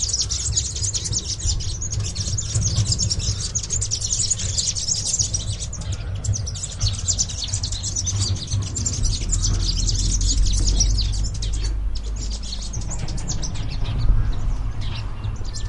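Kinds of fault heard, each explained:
Damaged data in a compressed stream: corrupted bytes throw the decoder off sync, giving a brief glitch at 9.2 s.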